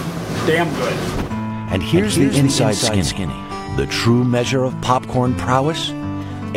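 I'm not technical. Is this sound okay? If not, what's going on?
No, not quite. From about 1.95 to 3.67 seconds there's a doubled audio track: a second, somewhat quieter copy of the sound trails about a fifth of a second behind, then cuts off abruptly. Likely cause: the audio got captured twice.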